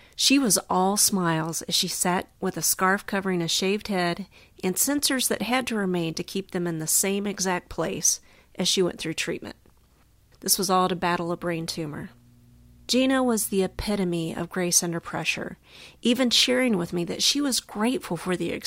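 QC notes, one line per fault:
10.74 to 13.80 s, mains hum: A steady low tone at 60 Hz appears under the sound, sitting roughly 30 dB below it. Power-line current is leaking into the signal path, through a ground loop or a nearby transformer. That adds a constant buzz with some low harmonics.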